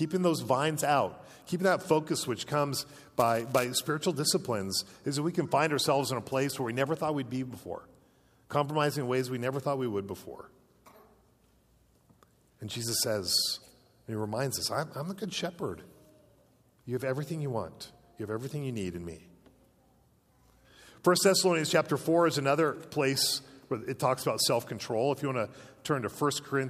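From 2.79 to 3.65 s the audio carries buffer tearing. A steady robotic buzz at 345 Hz sits on the sound there, which fits a 128-sample buffer. The writing program and the playback hardware have drifted out of step. They cross inside each period, so a small slice of every buffer replays audio from about ten milliseconds earlier. Hard joins on both sides of that slice repeat at the buffer rate and produce the rattle.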